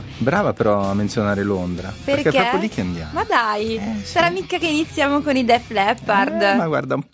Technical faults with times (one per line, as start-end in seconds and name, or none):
none